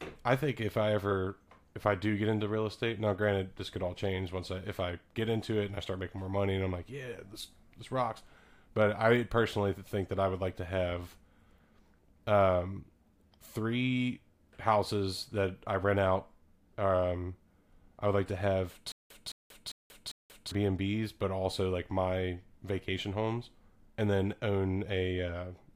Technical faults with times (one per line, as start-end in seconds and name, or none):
18.92-20.51 stutter with silent gaps